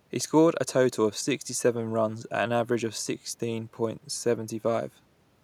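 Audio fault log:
No technical faults can be heard in this speech recording, and the signal stays intact and continuous throughout.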